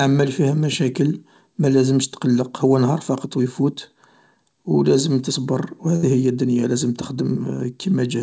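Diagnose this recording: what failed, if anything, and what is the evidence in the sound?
A burst of packet loss at 5.96 to 6.11 s, a network-stage failure. For about 65 ms the receiver extends the last received sound and fades it, then about 60 ms is simply missing before the speech resumes further along.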